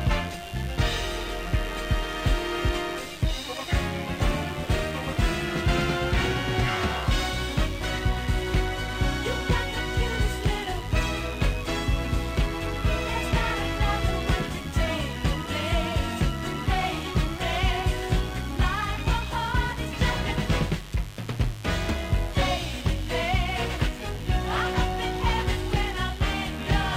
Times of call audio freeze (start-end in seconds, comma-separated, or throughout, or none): none